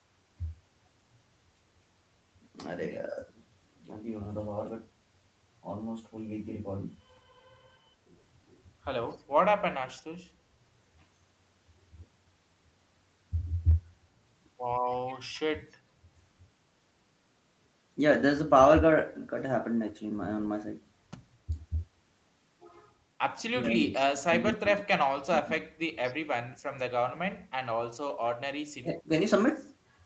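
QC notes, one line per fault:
3.08–3.2 s, 21.46–26.23 s and 28.8–29.11 s, speech suppressed in double talk: the speech dips by about 10 dB in the first brief spot and drops out in pieces in the later two, up to about 35 dB down, with roughly two seconds lost across the long middle stretch. Those dips are likely gating from an echo canceller that heard both sides at once and, unable to separate the near talker from loudspeaker echo, turned everything down.
23.93–23.99 s, echo leak: a faint copy of the speech, about 25 dB below the direct sound and trailing it by 224 ms, slips through as a short scrap inside the suppressed middle stretch. This is likely residual echo from a loudspeaker that the canceller failed to remove and sent back down the line.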